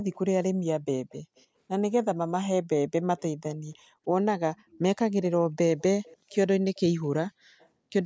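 Faint echo leak appears in short scraps at 0.12, 1.09, 1.36, 3.18, 4.7, 6.03 (the longest, about a third of a second), 6.75 and 7.59 s. Each is a copy of the speech arriving about 300 ms late, likely from the far end's echo canceller letting loudspeaker pickup slip back. It sits roughly 25 to 40 dB below the speech. A spectrogram shows faint duplicate harmonic traces trailing the main ones by 0.3 s, under the 8 kHz top of the band.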